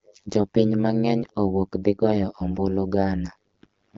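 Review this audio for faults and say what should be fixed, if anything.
Overlap-add ripple runs throughout: overlapping frame windows fail to sum evenly, so the level dips about 60 dB roughly 100 times a second, a steady metallic buzz unlike random dropouts. Prevent it by pairing analysis and synthesis windows whose overlap sums to a constant gain.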